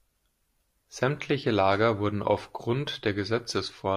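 No dropouts, clicks, distortion or other technical faults turn up anywhere in the speech.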